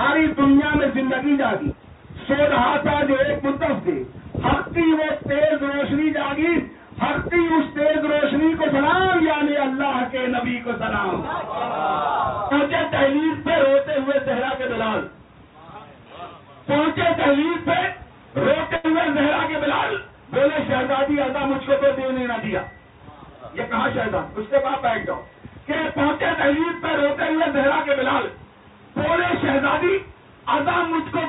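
Burst of packet loss, 18.76 to 18.86 s: the receiver stretched and faded the last sound across the 78 ms gap, then resumed 80 ms further on.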